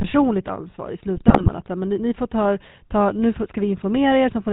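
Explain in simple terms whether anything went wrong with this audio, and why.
The whole recording went through the old GSM full-rate codec, which throws away everything above 4 kHz and rebuilds the voice crudely, so speech sounds buzzy and gravelly throughout.

From 1.16 to 1.51 s, just after "ansvar i", GSM bit errors corrupted the decoder's settings, making the voice break into squawks, pops and gargling.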